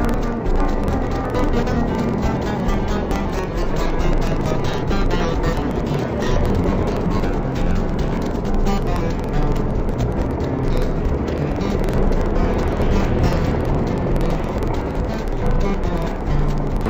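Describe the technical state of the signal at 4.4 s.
Interleaved audio read as planar is present at 4.4 s and throughout the clip. Each 46.44 ms block, which fits a 2048-sample block, has its first half played as left and second as right, so the sound drops an octave, doubles, and chops at 21.5 Hz.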